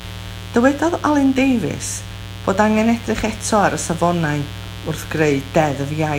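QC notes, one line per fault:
Throughout, mains buzz: sharp switching spikes twice per 60 Hz cycle stack up harmonics into the kilohertz range, giving a steady raspy buzz roughly 15 dB under the speech.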